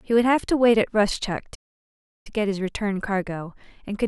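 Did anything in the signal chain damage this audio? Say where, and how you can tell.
Yes. The speech cuts out abruptly at 1.54 s and the output stays silent until 2.27 s, a gap of about 0.7 s in mid-flow with no fade either side, before the sound picks up again. That is a playback stall, and the cause is likely at the playback stage: the player's buffer ran dry or its thread was blocked, so nothing was written to the output until it recovered and resumed feeding samples.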